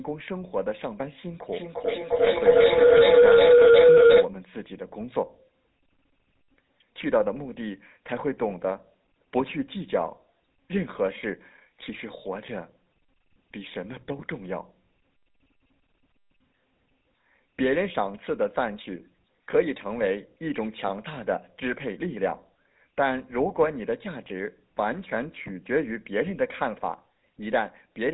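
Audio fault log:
throughout: GSM full-rate codec, a buzzy, gravelly roughness over the speech with nothing above 3.9 kHz, from pulse-driven vocal-tract modelling at a 13 kbps rate.
1.53–4.34 s: feedback howl, a tone near 500 Hz swelling to about 11 dB above the speech, with the loop repeating roughly every 400 ms, as a microphone-to-loudspeaker loop amplified each pass.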